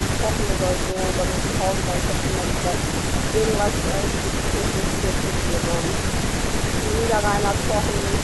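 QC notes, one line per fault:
0.92–0.99 s, echo leak: a brief, faint delayed copy of the speech, about 20 dB below it and trailing by 330 ms. This is likely a far-end loudspeaker feeding its microphone, with the echo canceller letting a short scrap slip back into the call.
3.45–7.45 s, periodic USB or driver dropouts: about five tiny ticks, one each second, each roughly a millisecond of audio replaced by silence. The even spacing points to a recurring task stalling the USB bus or audio driver, so a gap clicks wherever it lands on signal.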